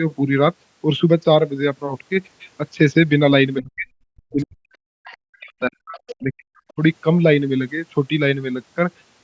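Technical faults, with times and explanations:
3.61–3.87 s, 4.08–5.99 s, 6.20–6.56 s and 6.75–6.79 s: speech suppressed in double talk. The speech dips, by roughly 40 dB at its deepest in the first three spans. The last one is a brief, shallower dip of about 15 dB. The long middle span is affected for well over a second. The likely cause is both sides talking at once. The echo canceller could not tell the local talker from the loudspeaker echo, so it turned both down.
5.05–5.17 s, 5.97–6.15 s and 6.56–6.73 s: other side's voice leaking through. Short scraps of a second, fainter voice come through. They sit about 25, 20 and 35 dB below the speech in turn, so the second one is the most audible. Each lasts under a fifth of a second. The likely cause is the far end playing on the loudspeaker and reaching the microphone. The echo canceller did not remove all of it, leaving these fragments.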